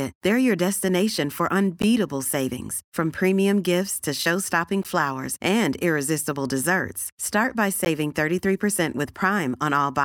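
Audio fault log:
1.82 s, 4.83 s, 7.85 s: gap between chunks. Hard-edged 13 ms silences recur every 3.0 s where chunks join, interrupting the speech without removing any of it.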